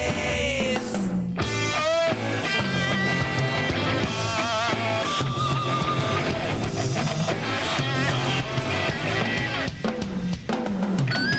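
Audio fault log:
throughout, gain pumping: the level breathes by around 10 dB and loud and soft passages sit squashed close together. This is likely caused by input gain set far too high, with a fast limiter or compressor clamping down on each peak and letting go in the pauses. The top end stops near 8 kHz, as the call path carries it.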